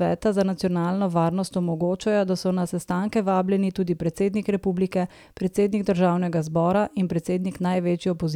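No technical faults can be heard anywhere in the recording: the signal stays continuous and steady in level, with no interruptions or disturbances at any point.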